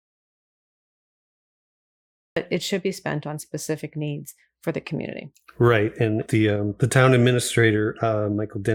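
From the start to 2.36 s there is an audio dropout to silence, likely lost input written as silence: a flat waveform, an empty spectrogram, then speech cutting in abruptly.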